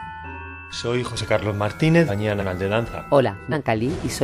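At 2.07, 2.39 and 3.51 s, compressed frames get skipped, jumping ahead roughly a second, then a fifth, then about 0.4 s.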